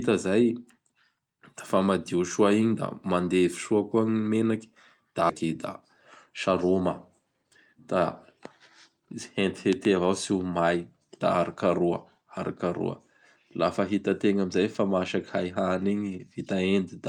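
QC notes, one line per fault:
5.29–5.44 s, skip ahead: roughly 0.7 s of speech just drops out and the two sides butt straight together with no gap, so it lurches forward.
6.30–8.40 s, jitter buffer speed-up: the receiver trims tiny pitch-period slices to shed backlog, about a tenth of a second total, so speech runs 5% fast at unchanged pitch.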